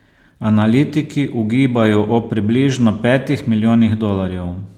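Nothing stood out on listening to this speech clip.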